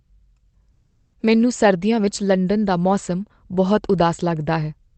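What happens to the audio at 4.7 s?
At 4.7 s the audio is intact, with nothing beyond the steady coding texture and the high-frequency limit of about 8 kHz that the Opus call path leaves on the speech.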